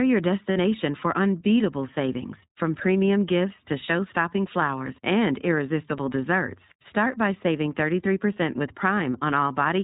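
Speech, coded throughout with the iLBC codec. Nothing above 4 kHz survives, and the voice sounds rough and synthetic, which fits 15.2 kbps iLBC. Lost iLBC frames cause a gap from 0.52 to 0.58 s. The decoder fills those 40 ms, about two 20 ms frames, with a repeated buzzy pitch cycle. The voice returns almost at once afterwards.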